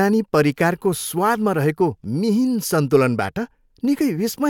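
From 0.10 s to 4.47 s the speech carries clock slip clicks: a steady run of tiny ticks roughly every 40 ms, around a hundred in all, fast enough to merge into a soft rattle behind the louder sounds. Each tick is a single sample dropped or repeated. The likely cause is two devices running on separate, unsynchronised clocks, with a mismatch of around 500 ppm building up to one whole sample at that regular interval.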